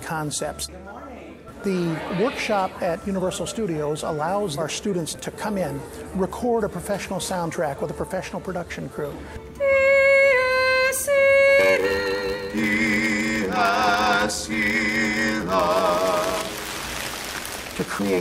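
From 11.59 s to the end at 18.20 s, a block size mismatch (padded) sets in: each block is shorter than the 512-sample read, which fits a 93.8 Hz buzz, with zero-filled gaps slowing the audio to 0.861 speed. Unlike a sample-rate error, timbre stays normal.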